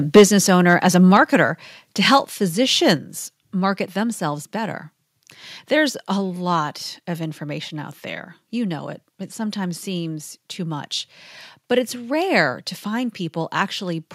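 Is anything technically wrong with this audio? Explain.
Yes. Microphone overload is audible at 0.15–0.23 s, 0.70–0.87 s and 2.13–2.15 s. The loudest peaks are flattened, most severely in the first burst, about 6 dB over with roughly a fifth of it clipped. The later two are about 1 dB over. This is likely input gain set too high for the converter.

The microphone volume steps down at 0.17 s (about 2 dB), 1.17 s (about 5 dB) and 2.97 s (about 4 dB). Each is an abrupt drop in the whole level, with background falling together with the speech. This is likely automatic gain control reacting to the clipped peaks by cutting device input volume.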